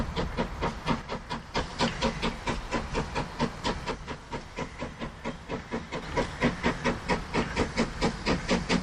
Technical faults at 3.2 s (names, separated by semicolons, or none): none